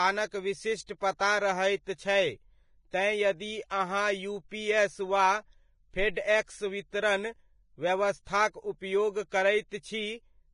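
Throughout the speech, nothing is present above 10.6 kHz, and the remaining treble is hissy and grainy, with fine detail turned to rough noise. This is likely Vorbis compression at a heavy setting, consistent with a low bitrate in the region of 26 kbps: the codec keeps a smooth spectral outline but quantises the fine detail so coarsely that it becomes noise of similar energy. Unlike a simple low-pass filter, the band below the cut-off is also degraded.

From 1.17 to 1.21 s, a short burst of hiss, about 32 ms long, arrives just before a sharp attack, which then sounds softened and smeared. This is pre-echo. The codec spreads its quantisation noise across a whole transform block, so noise sized for the loud onset also fills the quiet moment ahead of it. A click or dropout would sit on or after the event, but this smear comes before it.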